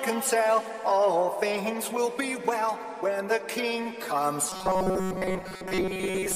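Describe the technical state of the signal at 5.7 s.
At 5.7 s, robotic sound from repeated short buffers (4.50 to 6.36 s): most audio is likely replaced by looped 5 ms chunks, giving a rigid 188 Hz buzz, seen as identical repeating waveform cycles and evenly spaced spectrogram harmonics.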